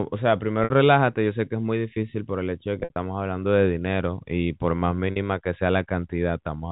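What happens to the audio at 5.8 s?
At 5.8 s the speech carries on intact, with nothing breaking into it beyond the narrow telephone bandwidth that G.711 coding gives the whole clip.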